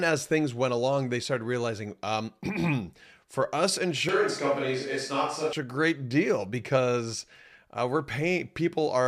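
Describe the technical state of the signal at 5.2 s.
At 5.2 s the speech sits inside a switch to a distant microphone that runs from 4.09 s to 5.53 s. The sound turns roomy and hollow, loses bass, and gains a faint background bed well below the speech, while the overall level stays about the same. The likely cause is that the close microphone dropped out and a farther one carried the speech. What sets it apart from added reverb or a bass-cut filter is that the room tone, thinning and noise all change together, abruptly at both edges.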